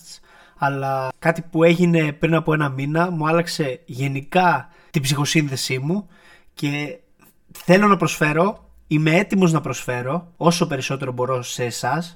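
Speech that sounds hollow and phasey throughout: channel delay (comb filtering), with one channel about 5 ms late, so summing to mono cuts evenly spaced notches starting near 100 Hz.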